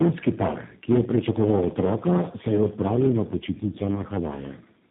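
From start to end, the speech is hard clipped. The level is pushed about 11 dB past what the chain can pass, so the loudest peaks are sliced flat. Only a few percent of samples hit the ceiling. The flat tops throw harmonics high up the spectrum. The result is a crackle and a gritty edge on each loud moment, rather than constant fuzz.

A block size mismatch (truncated) runs through the whole clip too. One stage writes longer blocks than the next one reads, and the leftover tail of each block is dropped. The sound points to 512-sample blocks being written. Each cut leaves a small seam, and the seams repeat at 100 Hz. That gives a steady buzz under the speech. With material discarded each time, the speech plays about 1.07 times fast, at close to normal pitch.

Tandem speech coding shapes the whole clip as well. The speech seems to have passed through three speech codecs in a row, with decoding and re-encoding at each border. 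The last stage sounds like a G.729A-type coder. Each codec works on damage the previous one left. Nothing is heard above 3.8 kHz, so the sound is muffled. It also sounds rough and warbly, worse than any single link would make it.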